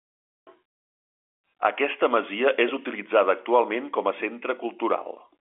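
No technical faults can be heard anywhere in the speech. It arrives through G.711 telephone coding, so the sound is confined to the 300 Hz to 3.4 kHz line band with nothing above 3.7 kHz, and any coding damage is faint at most.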